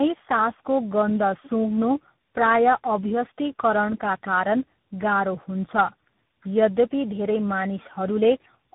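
Throughout, the speech carries tandem speech coding: three speech coders in a row, in a pattern that points to GSM full rate, AMR-NB and CVSD, each re-coding the previous one's errors. Nothing remains above 3.8 kHz, leaving the speech rough, muffled and warbly.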